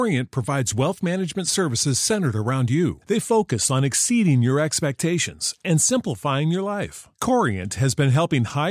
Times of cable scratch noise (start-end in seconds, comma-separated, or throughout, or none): none